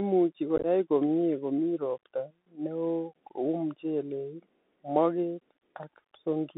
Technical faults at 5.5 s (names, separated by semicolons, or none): Bluetooth CVSD headset codec